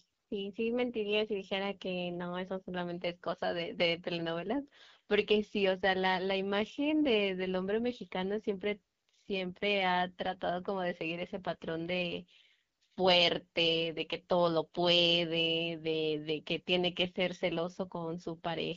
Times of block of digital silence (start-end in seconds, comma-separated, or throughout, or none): none